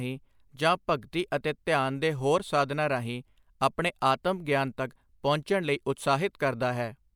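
Nothing in the recording stood out as a technical problem on listening.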